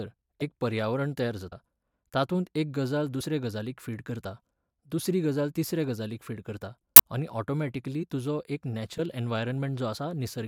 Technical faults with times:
0.40 compressed frames skipped
1.51 compressed frames skipped
3.20-3.23 compressed frames skipped
6.95-7.02 compressed frames skipped
8.00-8.04 compressed frames skipped
8.98 compressed frames skipped
9.94-9.97 compressed frames skipped

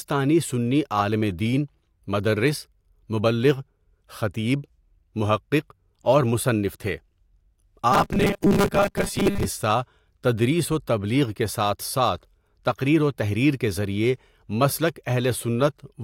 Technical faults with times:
7.92-9.45 robotic sound from repeated short buffers

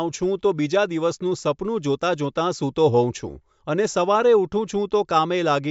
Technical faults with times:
none

